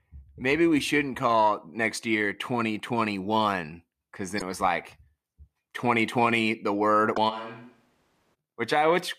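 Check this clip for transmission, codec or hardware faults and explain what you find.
Yes, there are a few faults here, two kinds in total, all in the speech.

Damaged data in a compressed stream hits twice, at 4.36 to 4.42 s, right before "it was like", and again at 7.12 to 7.18 s. Corrupted bytes make the decoder misread the frames there and lose sync until it finds the next frame header, so each one comes out as a short glitch.

From 7.31 to 8.33 s the speech suddenly turns roomy and hollow, with thinner bass. The level drops by around 10 dB and room noise comes up to roughly 30 dB below the speech. This is likely a switch to a distant microphone, with a farther mic standing in for the close one. It snaps back just as abruptly at the end.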